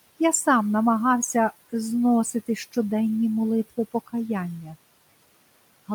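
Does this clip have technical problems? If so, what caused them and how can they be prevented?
No technical faults are present.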